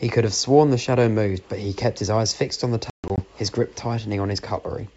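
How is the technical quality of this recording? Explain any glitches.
The recording has one clear glitch, carried over G.722 wideband coding at 64 kbit/s. Packet loss on an ADPCM call hits between 2.90 and 3.20 s. About 180 ms of audio drops out, with the longest silent hole lasting 140 ms. The holes have hard edges. The decoder's predictor loses step, so speech returns slightly distorted before settling.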